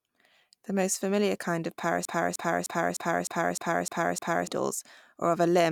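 At 2.05 s, right after "most familiar kind of", the speech falls into a broken-record loop: a fragment about 0.30 s long plays back to back, exactly the same each time, eight times in a row until 4.47 s. The identical repeats point to a player, encoder or stream that stalled and kept re-sending the last chunk it held, likely a buffer underrun. Whatever speech belonged in those 2.4 seconds is missing.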